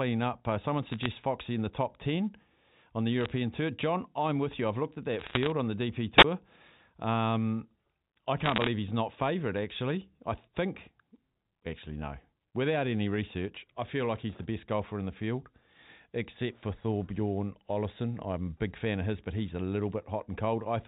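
Bit errors on a digital phone line crackle at 0.91 to 1.06 s, 3.21 to 3.31 s and 5.19 to 5.50 s. Flipped bits corrupt single samples, giving sharp ticks. At 6.17 to 6.24 s, a wireless microphone squelch dropout cuts in. Hiss rises, then about 19 ms of silence. Crackle returns at 8.44 to 8.68 s, denser.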